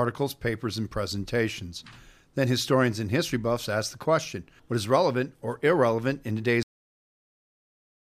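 At 6.63 s the speech stops abruptly in the middle of a sound and falls straight into digital silence, with no natural decay or room tail, and that silence runs to the end of the clip. This is a cut-off end: the final stretch of audio was never written out or played back, so the signal is simply truncated where the last completed buffer finished rather than being allowed to fade or close naturally.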